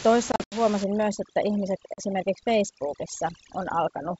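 Packet loss on an ADPCM call first strikes between 0.32 and 0.57 s, where 140 ms of the speech drops out in hard-edged silent gaps scattered over 200 ms, the longest about 80 ms. This pattern points to several packets going missing. Each time the audio resumes, the decoder's adaptive predictor and step size have drifted from the sender's, so the speech returns slightly distorted before it settles.

Overdone noise removal runs from 0.84 s to the end. The suppressor pushes frequency bands down hard wherever they sit near its noise estimate. The room noise, about 13 dB below the speech, collapses into near silence with twinkling specks, and quiet parts of the speech vanish with it.

Packet loss on an ADPCM call returns at 1.94 to 2.02 s with 40 ms of audio lost, consistent with a couple of packets lost. As the predictor recovers, the speech comes back slightly distorted.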